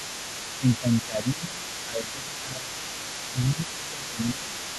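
A speech recording carries the other side's voice leaking through for its whole length, sitting roughly 15 dB below the talker. This is most likely echo from a loudspeaker that the echo canceller failed to remove, and it is a second, separate voice rather than reverberant smearing of the main one. The main speech is also suppressed in double talk from 0.58 to 1.63 s, 1.86 to 2.82 s, 3.53 to 4.55 s (dips of around 10 dB) and briefly at 3.3 s (a smaller dip). These drops track the overlapping far-end voice rather than the talker's own loudness, as the canceller likely ducks both sides.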